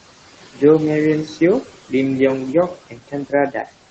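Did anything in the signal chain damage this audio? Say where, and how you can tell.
Yes. Noise suppressor artifacts run through the whole clip, at the call-processing stage. The room noise, about 17 dB below the speech, is pulled down by about 16 dB between phrases and swells back under them. The frame-by-frame band gains make the noise floor rise and fall with the speech.

Speech cut by the noise suppressor occurs at 0.51 to 0.61 s, 2.74 to 3.33 s and 3.51 to 3.7 s, with dips of about 17, 17 and 12 dB. The suppressor misread quieter speech energy as noise and attenuated it, so those stretches sound swallowed and faint.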